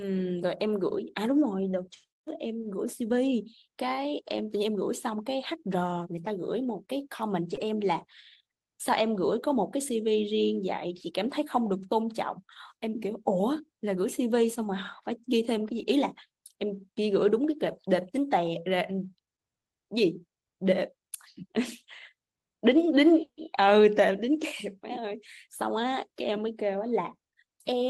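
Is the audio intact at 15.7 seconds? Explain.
No. From 15.73 to 15.79 s there is a lost packet rebuilt from error correction. About 40 ms of speech is missing from the original stream, which fits two lost 20 ms packets. The decoder filled the hole with the low-bitrate redundant copy carried in the following packet, so playback does not stop. That copy is coarser, and the patched stretch sounds briefly rougher and noisier than the surrounding speech.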